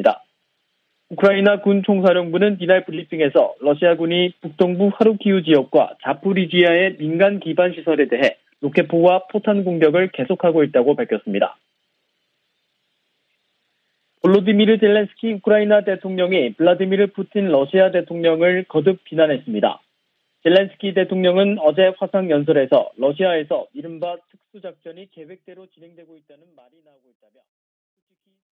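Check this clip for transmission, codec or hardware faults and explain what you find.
No faults can be heard; the only change in level is a smooth fade-out that begins around 23 s and reaches silence at 28.5 s, shaped as an editor would do it, with no click or hard edge.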